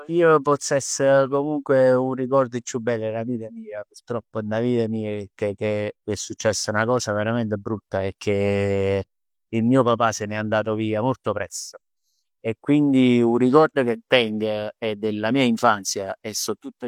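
A speech recording with nothing technically wrong with it at any point.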